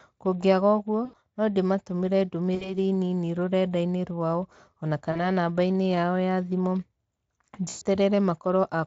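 VoIP packet loss concealed by the speech codec hits at 1.05, 2.55, 5.11 and 7.69 s, covering about 80, 60, 40 and 120 ms. Unlike a hard dropout, the speech smears into a buzzy tone or coloured noise that fades, and stays weak briefly after returning through the Speex decoder.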